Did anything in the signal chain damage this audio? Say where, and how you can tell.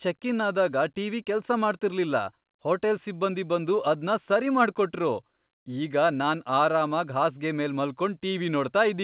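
No, nothing in the chain damaged it.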